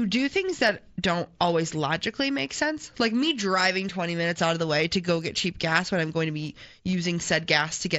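At 6.92 s, right after "I'm going to be", there is concealed Bluetooth headset packet loss. About 15 ms of audio went missing, which fits a pair of lost packets. The receiver filled the gap by repeating the closest-matching recent waveform. The patch is brief, within the wideband mSBC headset audio.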